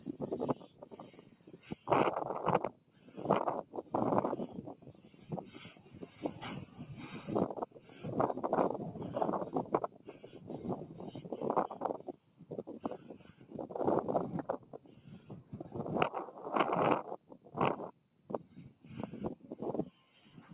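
A noise suppressor meant for speech stays on for the whole clip, working on sound it was not built for. It treats steady and fading material as noise and pulls it down. Its gain swings by roughly 15 dB. Attacks get through, but held sound and tails sink. The result pumps and thins out. The band also stops near 4 kHz, which fits a narrowband telephone codec such as G.711 on the call path.

Sound cut by the noise suppressor shows up in eight stretches. They run from 0 to 1.87 s, 2.72 to 3.73 s, 4.75 to 6.79 s, 7.66 to 8.0 s, 9.88 to 11.2 s, 11.98 to 13.53 s, 14.59 to 15.53 s, and 17.18 s to the end. Each time the level drops by about 9 dB at its deepest, and by about 8 dB in the third stretch. Decays are clipped short, and the sound ducks while sudden onsets stay level.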